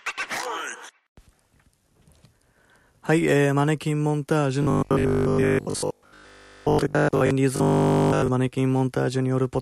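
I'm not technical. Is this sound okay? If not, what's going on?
No. From 4.63 to 7.31 s and again from 7.56 to 8.28 s there's robotic sound from repeated short buffers: a metallic 50 Hz buzz, likely from 20 ms chunks replaying while most or all of the real audio is lost.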